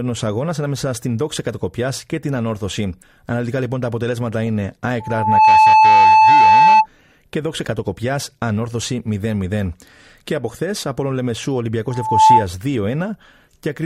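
A microphone was picking up its own loudspeaker, and at 871 Hz the loop gain passed unity, producing loudspeaker feedback squeal over this speech from 5.00 to 6.87 s and again from 11.90 to 12.47 s. The tone swells within about half a second to roughly 10 dB above the voice, then returns faster and louder, near 15 dB.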